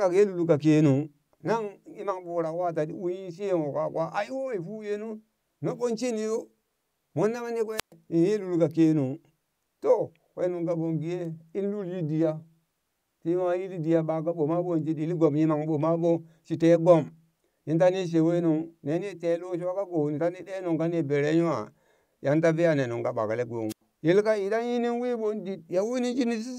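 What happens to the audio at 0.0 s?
Nothing goes wrong at 0.0 s; the audio is intact there, with no dropout, click or distortion at the opening.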